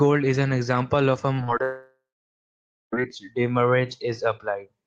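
A speech clip with two kinds of fault. Short concealed packet loss hits three times, at 1.35 to 1.40 s, 1.44 to 1.50 s and 1.58 to 1.61 s. Gaps of about 20 to 40 ms were patched by extending the preceding sound. Each one smears or wobbles briefly. Then, from 1.63 s to 2.94 s, a long network dropout is the likely cause of the loss of about 1.3 s. The last sound stretches into a fading buzz or hiss. Silence then holds for about 0.93 s before the audio resumes with that stretch missing.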